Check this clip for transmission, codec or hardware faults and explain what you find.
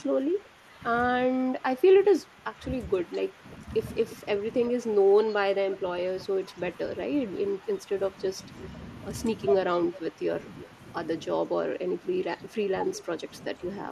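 Two faults turn up here, both pointing at an echo canceller on the call that isn't coping.

Speech suppressed in double talk hits at 0.12–0.82, 1.58–3.68, 4.22–6.81, 7.49–8.38, 9.66–10.8 and 11.47 s to the end. The voice dips by up to about 10 dB in patches. Likely the canceller heard both sides at once and ducked everything.

Echo leak shows up at 4.1 s and again from 5.72 to 6.22 s: a faint copy of the speech about 354 ms late, roughly 20 to 25 dB down. Residual loudspeaker pickup likely slipped past the loudspeaker side's canceller.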